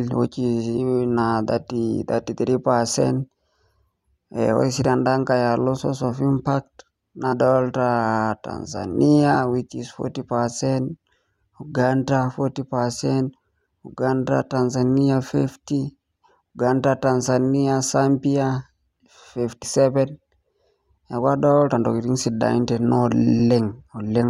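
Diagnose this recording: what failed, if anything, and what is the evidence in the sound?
The fault is at the codec stage: compressed frames skipped. The speech jumps forward at 7.32, 9.34 and 23.39 s. Each jump drops about 50 ms, roughly two frames of 23.2 ms.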